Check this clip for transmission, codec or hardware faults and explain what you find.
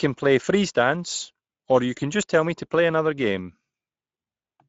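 One fault runs through the whole speech clip: Speex codec damage, plainly audible from start to finish. Speex is a CELP coder that models the vocal tract and spends a limited bit budget on the excitation signal. The degree of damage fits a middle setting of around 17 kbps. That budget leaves the speech grainy and hoarse. Above 4 kHz the band is only a shaped noise fill, so sibilants sound hissy rather than crisp. On a spectrogram, harmonics look smeared, the region from 4 to 7.7 kHz shows diffuse noise without harmonic structure, and nothing appears above 7.7 kHz.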